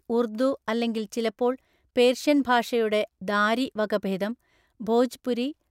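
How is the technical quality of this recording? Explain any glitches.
There's nothing here to explain, since the recording comes through without a single glitch you could point to.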